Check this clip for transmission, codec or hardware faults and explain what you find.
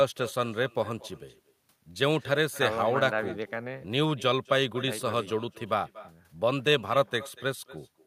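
One fault runs through the whole clip: echo with no canceller. The far end's loudspeaker feeds its microphone, returning speech about a fifth of a second later. The echo sits about 19 dB down, a thin shadow.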